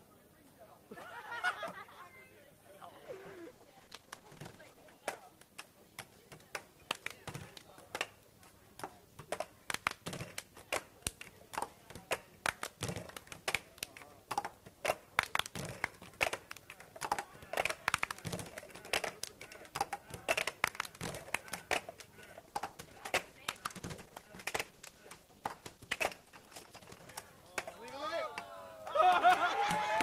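Everyday sounds turn coarse and degraded from 3.07 to 6.33 s and from 22.34 to 27.19 s, then clear. This is a call bitrate drop, which fits a fall from about 40 to 12 kbps.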